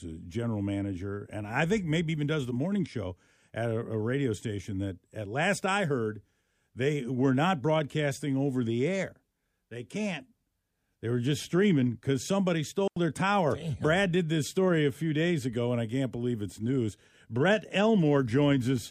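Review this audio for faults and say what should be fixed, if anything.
At 12.88 s, right after "just streaming because somebody" and before "their tower", the speech drops into a clean hole of near silence for about 87 ms. It is a digital wireless dropout. The receiver lost too much data and muted quickly, with no noise burst either side. To prevent it, keep the transmitter in clear line of sight and close to the receiver, away from interfering sources.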